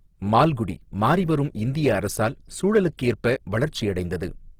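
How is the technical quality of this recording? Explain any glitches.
The recording has plainly audible coding damage throughout, plus one brief smeared attack.

Across the whole clip the speech sounds grainy and rough rather than swirly. Content still reaches about 20.3 kHz, so it is not muffled. This points to Opus compression in music mode, likely at a low bitrate around 16 kbps. Starved bands are filled with folded or noise-like energy, which leaves few of the watery holes that MP3 produces.

At 2.97 s, just after "மாறிவரும் இந்திய அரசியல்", there is pre-echo. A hiss of about 13 ms leads into a sharp onset, whose edge is softened. The codec spread its noise across the block, ahead of the attack. Unlike a click, the burst builds into the sound rather than standing apart from it.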